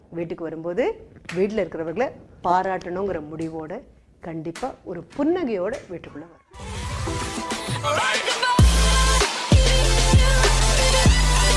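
No technical faults are audible anywhere in the recording.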